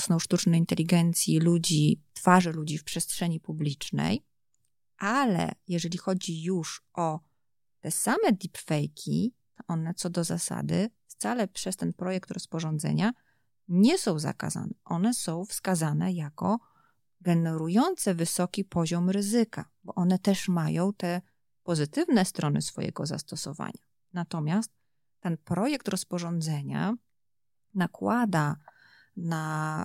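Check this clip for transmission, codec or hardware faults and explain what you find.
One fault: a sudden gain jump at 2.41 s, right after "sztucznej inteligencji ludzi". Speech and background noise drop together by about 6 dB and stay lower to the end, likely from a gain change applied between samples without a ramp, unlike automatic gain control, which eases in gradually.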